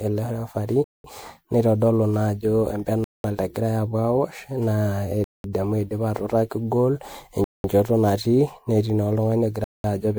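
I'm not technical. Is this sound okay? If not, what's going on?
No. The recording was likely saved in a compressed MP3 format, reopened and saved again about seven times. This is called generation loss: each save discards a little more detail, so the speech sounds swirly, hollow and smeared, and sharp sounds lose their crispness.

The audio was also delivered in 2-second pieces, with silence inserted between them. This is a gap between chunks. It leaves five abrupt 0.2-second holes, at 0.84, 3.04, 5.24, 7.44 and 9.64 seconds.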